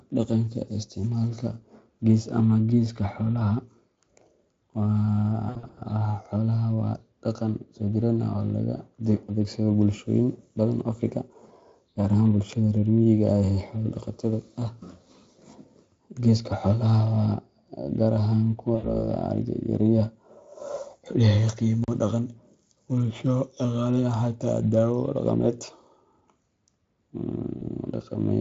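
VoIP packet loss concealed by the speech codec appears first from 5.49 to 5.80 s. About 180 ms of audio went missing in several gaps spread over roughly 280 ms, the longest run lasting 60 ms. The decoder filled each gap by extending its last pitch and spectral shape at falling gain, so the speech smears into a fading buzzy tone or coloured noise and stays weakened briefly after real audio resumes. The same concealment returns from 18.75 to 19.01 s, covering about 80 ms of loss. A block of digital silence lands at 21.84 to 21.88 s, where 40 ms of output was zeroed, probably because the buffer went unfilled in time. The audio drops abruptly to nothing and back without any fade, leaving a short hole. Concealment occurs once more at 27.57 to 27.63 s, masking about 40 ms of lost speech with a brief smear, all heard through Speex coding that colours the speech only lightly.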